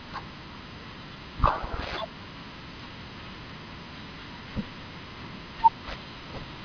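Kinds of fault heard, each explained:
Listening through the speech, nothing stood out as a fault.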